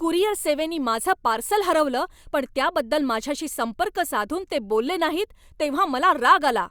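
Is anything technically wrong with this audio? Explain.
No, there is nothing technically wrong here.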